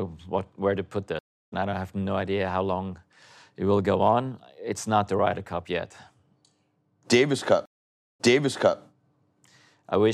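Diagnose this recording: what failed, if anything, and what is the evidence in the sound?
A stream reconnect at the network stage occurred twice. After "what where to put", the sound stops at 1.19 s for 300 ms and resumes at 1.53 s about a fifth of a second further on. From 7.66 s to 8.79 s a 510 ms silence ends with the sound jumping back 0.63 s and repeating material. That rewind is the distinguishing sign: a simple dropout or packet loss never replays earlier audio. Here the connection failed, and a fresh decoder joined the stream at a different point.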